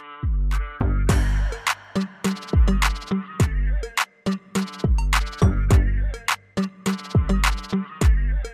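Nothing is technically wrong with the clip, as no faults can be heard anywhere in it.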